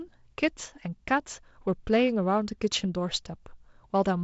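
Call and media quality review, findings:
No faults found. G.722 wideband path working as expected: speech band stops near 7.7 kHz, with light coding noise consistent with the 48 kbit/s mode.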